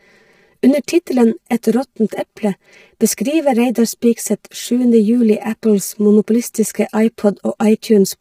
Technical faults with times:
0.00-8.21 channel delay (comb filtering)
0.00-8.21 low-delay AAC compression

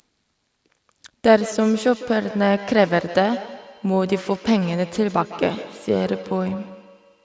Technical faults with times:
1.39-7.24 feedback echo between two devices

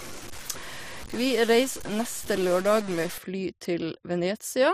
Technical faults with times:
0.00-3.18 stuck bit

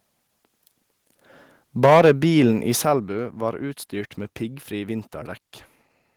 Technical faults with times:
1.83-2.11 microphone overload
1.86 microphone volume stepped down
2.85 microphone volume stepped down

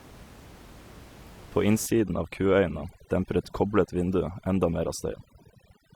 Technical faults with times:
1.86-5.95 overdone noise removal

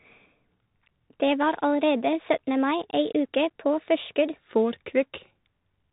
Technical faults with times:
0.00-5.92 Bluetooth CVSD headset codec
0.00-4.36 section at the wrong speed

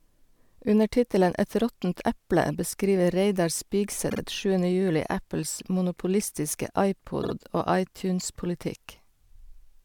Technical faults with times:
4.09-4.19 repeated frames
7.22-7.33 repeated frames

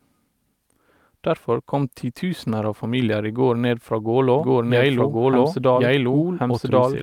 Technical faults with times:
4.39-7.02 doubled audio track

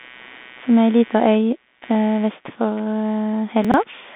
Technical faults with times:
0.00-4.15 computer activity noise
0.00-4.15 Bluetooth CVSD headset codec
3.65-3.74 chunks out of order

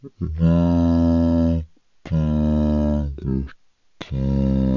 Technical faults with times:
0.00-4.77 wrong sample rate

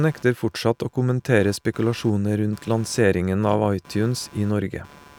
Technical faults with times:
0.00-5.19 computer activity noise

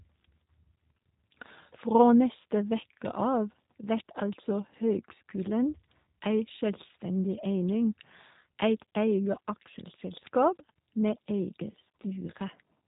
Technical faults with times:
0.00-12.88 G.729 codec

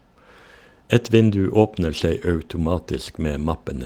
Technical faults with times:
1.01-1.07 lost packet rebuilt from error correction
1.97-2.03 lost packet rebuilt from error correction

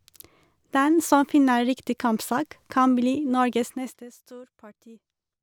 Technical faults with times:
none

